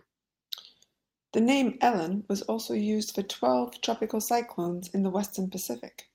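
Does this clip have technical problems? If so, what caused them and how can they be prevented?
No, the signal shows no technical problems, so there is nothing to trace back or prevent.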